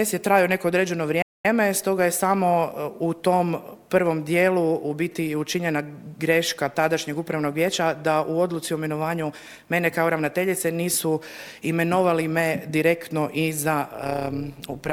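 At 1.22 s the sound cuts out mid-flow and stays silent until 1.45 s, so you get a gap of about 225 ms before it picks up again. That's a playback stall. The most likely story is that the player either ran dry of buffered data or had its output thread held up for a moment, and nothing was sent to the output until it recovered. It's an obvious hole rather than a click.

From 13.92 s through to the very end there's an overlap-add ripple. The audio sounds like it was split into windowed frames and rebuilt with overlaps that don't add up to a steady gain, so the level dips and swells once per frame. Here the swing is about 11 dB at around 150 Hz, which comes across as a metallic buzz with extra tones around each note over the last second or so of sound.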